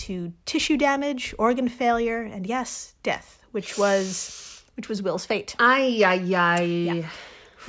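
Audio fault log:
No faults heard anywhere in the recording.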